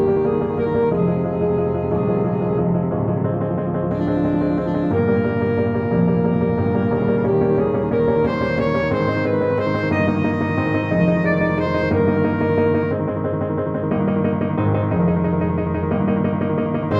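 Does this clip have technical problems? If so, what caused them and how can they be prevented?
No, there are no technical problems to point to in this clip. With nothing going wrong, there is no cause to trace and nothing that needs preventing.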